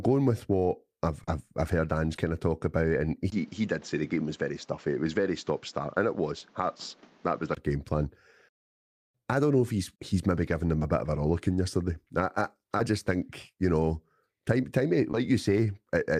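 At 1.23 to 1.29 s and 2.15 to 2.19 s, short concealed packet loss occurs. Audio arrived too late, and the receiver filled 40 ms, then 20 ms, by extending the preceding sound. Each gap is heard as a brief smear or wobble.

From 3.3 s to 7.57 s, the sound turns duller, with nothing above 7.6 kHz. A 20 ms silence marks the change. New background noise sits roughly 30 dB down, and the level barely shifts. This is likely an input switched to a poorer device.

Within that stretch, at 6.39 to 6.43 s, another 20 ms loss is concealed.

Further short concealed packet loss follows at 10.79 to 10.83 s, 12.77 to 12.81 s, and 15.11 to 15.15 s. Each fills 20 ms and leaves a brief smear or wobble.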